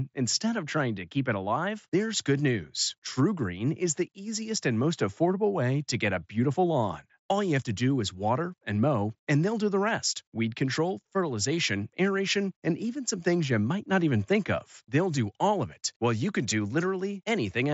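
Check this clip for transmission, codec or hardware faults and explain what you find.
One transmission fault, at 3.08 s, just after "alive there's good news": concealed Bluetooth headset packet loss. A voice packet from headset to phone went missing, and the receiver filled the gap of about 7.5 ms, which fits a single lost packet, by repeating the best-matching stretch of the preceding waveform. Because the patch is so short and copies audio just heard, it is almost hidden, at most a faint blip in the speech. The wideband mSBC headset codec carrying the call, at 61 kbps, adds only a light graininess.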